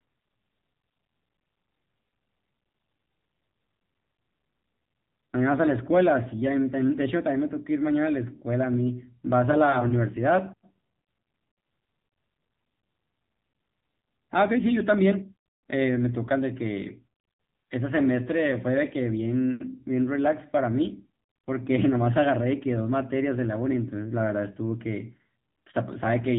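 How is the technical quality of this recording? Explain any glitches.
The technical quality is limited by the AMR narrowband mobile codec, whose damage is plainly audible across the whole recording. The speech is band-limited, with nothing above 3.8 kHz, so sibilants and consonant detail are dull. AMR-NB rebuilds speech from a vocal-tract model excited by a few pulses per 5 ms subframe, and the buzzy, synthetic texture here points to one of its low-bitrate modes, around 8 kbps.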